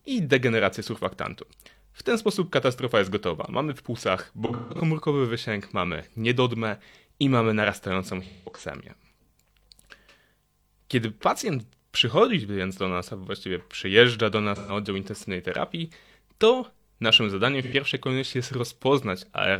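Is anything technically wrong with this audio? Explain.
Yes. AAC frame loss with concealment occurs at 4.46–4.80, 8.24–8.62, 14.56–14.72 and 17.63–17.73 s. The decoder rebuilds missing frames from the last good spectrum, so the speech sounds smeared and phasey there, and a spectrogram shows blurred, featureless patches.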